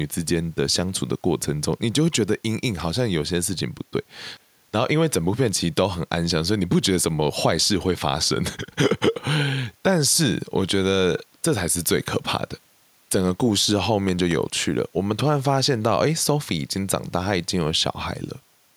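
At 14.09 s a loud pop breaks into the speech, and a second follows before 14.33 s. The two sharp hits stand well above the level of the speech, peaking roughly 10 dB higher. They sit on top of the talking, which carries on underneath without a gap. The likely cause is a sudden electrical step or pulse, from a plug, switch, static discharge or driver glitch, that was added to the signal and then shaped by the circuits after it.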